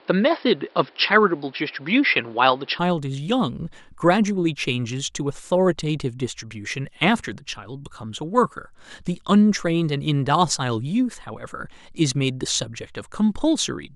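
The system was likely recording through a poorer input device for the first 2.79 s before changing to a better one. A case of the input switched to a poorer device, this opening stretch of speech has nothing above 5.4 kHz, so it sounds dull and boxy, with faint background noise sitting well below the speech. At 2.79 s the full bandwidth returns abruptly, with no silence at the switch and no noticeable jump in level.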